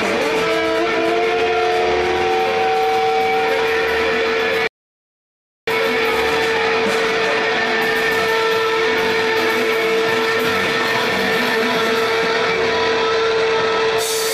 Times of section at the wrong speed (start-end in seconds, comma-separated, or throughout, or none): none